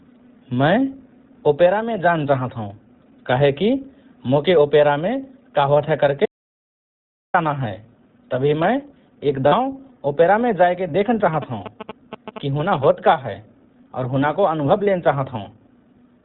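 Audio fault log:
throughout iLBC codec: speech squeezed through a narrowband 20 ms frame coder, fitting about 15.2 kbps, so nothing above 4 kHz survives and voices sound rough, slightly synthetic.
6.26–7.34 s audio dropout to silence: input likely lost for 1.08 s, so the sound cuts off mid-flow into silence, no room tone, then returns abruptly.
9.48–9.54 s lost iLBC frames: 40 ms of packets missing, decoder repeats the last pitch cycle with noise, giving a brief buzzy held-vowel smear before recovering instantly.
11.34–12.85 s GSM signalling bursts: a nearby 2G phone's radio bursts rectified in the audio circuit, heard as a galloping dit-dit-dit of short 217 Hz buzzes, roughly 10 dB below the speech.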